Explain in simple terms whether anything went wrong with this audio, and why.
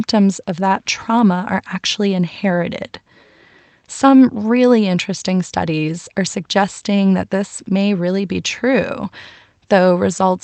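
Listening to this speech recording, nothing stood out as having gone wrong, and what comes through sounds as you'd expect from an ordinary internet call.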